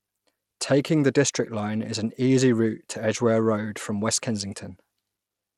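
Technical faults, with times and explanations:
Throughout, Bluetooth SBC compression: the speech sounds gritty and coarse, nothing above about 15.9 kHz, likely from a low bitrate near 96 kbps.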